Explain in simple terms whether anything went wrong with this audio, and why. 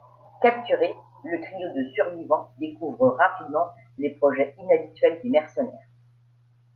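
Something did go wrong here, and it's all about timing. The main problem is clock drift between sender and receiver: the device sending this speech ran its audio clock faster than the receiving end, by roughly four percent. So audio kept arriving a little quicker than it could be played out, and the waiting area that smooths out a call's delivery kept filling up instead of staying level. Left alone, the delay would just keep growing.

To cope, the receiver made repeated timing corrections from about 0.15 s right through to about 6.51 s, trimming tiny slices out of the sound to catch up, which works out to playing it back around 105 percent of normal speed. These cuts all go the same way but aren't evenly spaced. The call path itself, Opus with sound reaching up to about 12 kHz, isn't the issue.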